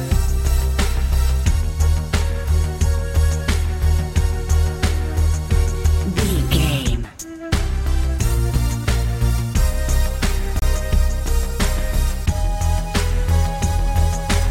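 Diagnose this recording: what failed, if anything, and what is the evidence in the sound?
A Bluetooth stall at 10.59 to 10.62 s, a playback-stage fault on the wireless link, is the likely cause of the one audible failure. The sound drops to complete silence for about 26 ms and then carries on. A gap of that length with clean silence, rather than noise or a glitch, fits a receiver buffer running empty while radio interference held back packets, with output pausing until the retransmitted audio arrived.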